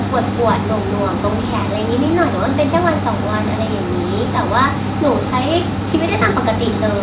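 Speech, carried over a narrow call channel with nothing above 4 kHz, consistent with G.711 mu-law. From 2.75 to 2.89 s the loudest syllables turn harsh and crackly, their peaks flattened by about 3 dB, a small fraction of samples. The likely cause is microphone overload: input gain set too high, driving the converter into clipping.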